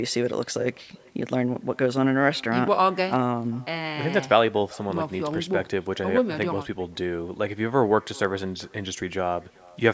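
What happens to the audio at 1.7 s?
At 1.7 s the call has echo with no canceller: the far end's loudspeaker feeds its microphone and nothing removes it, so the speech returns after roughly four tenths of a second, a faint, thin copy about 27 dB down, trailing it throughout the clip.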